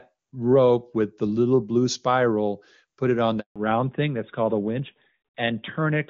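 Right after "spiral put it on", the speech dies away at 3.40 s and stays silent until 3.56 s, a 160 ms hole. This is a handover gap: the call was passed between networks and no speech frames arrived during the switch, so whatever was said then is lost.

From 3.56 s to the end, the speech sounds duller and rougher, with nothing left above 4 kHz. This is a fallback to narrowband. Before the gap, the HD Voice wideband codec sounds clear, fitting a high AMR-WB rate around 23.85 kbit/s. After the handover, the call drops to the older AMR-NB codec, which fits its 12.2 kbit/s mode, and the upper band is simply gone.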